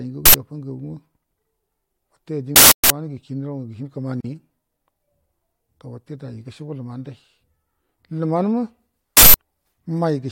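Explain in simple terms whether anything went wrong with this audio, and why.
Three times, a short, harsh blast of digital noise cuts in: at 0.26 to 0.34 s (about 85 ms), 2.56 to 2.90 s (about 341 ms) and 9.17 to 9.34 s (about 171 ms). This is an uninitialised buffer. A block of audio was played before anything was written into it, so leftover memory came out as noise. The lengths fit blocks of 4096, 16384 and 8192 samples.

At 4.21 s the speech briefly drops into silence for about 39 ms, then resumes where it stopped. This is a gap at a join of encoded pieces. The audio was encoded in separate parts, and the silent padding each part carries was left in when they were joined.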